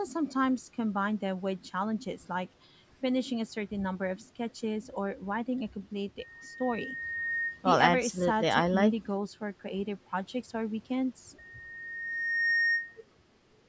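From 11.38 s to 13.04 s a loudspeaker feedback squeal appears: a steady 1.8 kHz tone swells over roughly a second until it sits about 5 dB above the speech. The microphone is picking up its own loudspeaker, and the loop gain at that frequency has exceeded unity.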